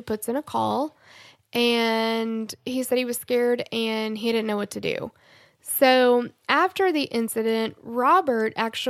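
No technical faults are audible anywhere in this speech.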